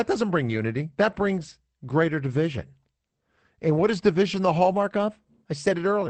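Right at 0.45 s there's a lost packet rebuilt from error correction, running to about 0.63 s. Roughly 100 ms of speech got played back from the low-bitrate backup copy carried in the following packets, so nothing drops out, but that stretch sounds grainier and noisier than what's around it.

At 1.49 s there's a short concealed packet loss: about 20 ms never arrived in time, and the decoder bridged it by extending the last bit of sound before fading back into the real signal. You hear it as a tiny smear or wobble. Straight after, at 1.51 s, another 20 ms comes back from the error-correction copy, so the roughness carries on a moment longer.

At 3.87 s the error-correction rebuild happens again for about 40 ms, giving another brief patch of coarser, noisier sound that fits a couple of lost packets.

From 4.74 s to 5.71 s everything runs about 6% fast and sits roughly 102 cents sharp, so about a semitone, then snaps back. 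Speed and pitch move together and then return all at once, which points to a drift correction step that likely jumped the playback rate to rebalance a buffer between two clocks.

The call codec's band tops out around 8 kHz throughout.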